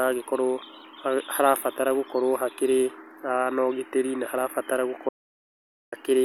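At 5.09 s the speech cuts out abruptly and returns at 5.92 s. This is an audio dropout to silence, lasting about 0.84 s. The gap is silent, with no room tone. The input was likely lost while recording continued.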